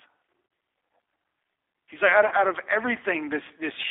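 G.729 coding runs through the whole speech clip. This 8 kbit/s codec does not send the waveform. It rebuilds each 10 ms frame from a vocal tract filter, a pitch predictor and a few pulses, so the voice comes out audibly rough and slightly synthetic. The band is held to roughly 300 Hz to 3.6 kHz, which leaves it thin and boxy. The coding damage is plainly audible rather than subtle.

VoIP packet loss concealed by the speech codec occurs twice. From 0.47 to 0.51 s, about 40 ms of audio is missing, which fits two 20 ms packets. The decoder fills the gap by carrying forward its last pitch and filter settings at falling gain, so the sound smears into a buzzy tone or coloured noise that fades. The same happens from 2.27 to 2.34 s, between "like out" and "out of". Because each frame builds on the one before, the voice stays weak or distorted for a moment after the audio returns.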